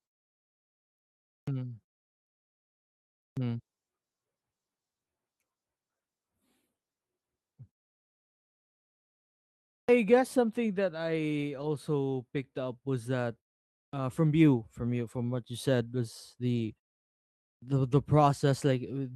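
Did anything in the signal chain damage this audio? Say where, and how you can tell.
Yes. Clipped start after a pause occurs at 1.35, 3.25, 9.77, 13.82 and 17.51 s, at the playback stage. After each silence, lasting 0.5 to 2.1 s, the output device appears to sleep and needs time to wake and lock again, so roughly 110 to 125 ms of onset is swallowed. The sound jumps in abruptly without its first sounds, as just before "guess something that I", and between "picked up was that" and "from you from you".

Lost packet rebuilt from error correction occurs at 11.57 to 11.63 s, just after "guess something that I", and at 16.55 to 16.73 s. This is damage on the network path. The codec fills each gap with the low-bitrate backup copy carried in the next packet, so nothing drops out. Instead, about 40 ms and then 100 ms of audio turn briefly rougher and noisier, which points to two lost packets and then five.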